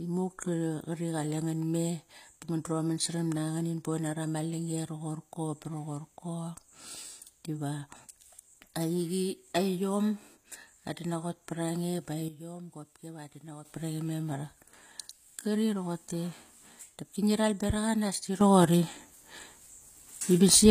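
A low-bitrate codec, likely HE-AAC, shapes the whole speech clip. Only the lower spectrum is properly coded, and the treble is rebuilt by copying lower bands upward under a coarse envelope. The top end keeps its brightness, but its harmonics no longer line up with those below, so sibilants come out gritty and metallic. The damage is plainly audible, nothing remains above 15.5 kHz, and the sound fits a stream of about 24 kbps.

At 12.28 s a sudden gain jump, likely a level change applied without a ramp, drops the speech and its background noise together by about 11 dB, and both snap back at 13.65 s. At 18.41 s a second jump in the opposite direction raises everything by about 10 dB, and that louder level holds to the end of the clip.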